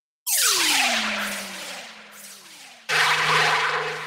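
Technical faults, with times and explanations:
No technical faults can be heard; the signal carries the everyday sound as captured, with nothing added to or taken from it in transmission or handling.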